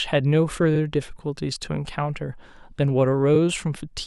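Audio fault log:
0.75 s and 3.35 s, repeated frames: a chunk of the speech plays twice, 46.4 ms then 23.2 ms, which fits two and then one compressed frames being resent. Each is heard as a quick stutter and adds its own length to the clip.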